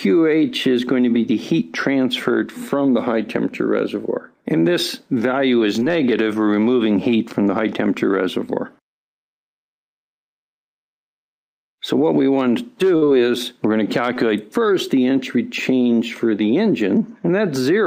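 At 5.79 s there is a short concealed packet loss. About 20 ms of audio never reached the decoder in time. The receiver covered the hole with roughly 18 ms of synthetic continuation built from the preceding sound, then blended back, ending a few milliseconds late. It is heard as a brief smear or wobble up to 5.84 s.

A burst of packet loss follows at 12.96 s. About 60 ms of consecutive audio went missing. The receiver extended the last sound for about 57 ms and faded it as the gap ran on. A pitched sound turns into a held buzz, while noisier material becomes a fading hiss. Playback picks up at 13.04 s, with the lost stretch simply gone.

A second short concealed packet loss occurs at 14.14 s. Here 20 ms was lost and 20 ms was filled in. It leaves another quick wobble, ending at 14.18 s.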